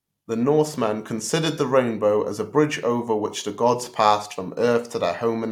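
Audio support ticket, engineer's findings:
No audible faults found in this speech recording.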